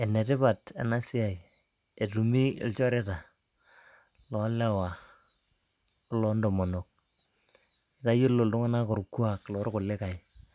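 No technical faults are audible.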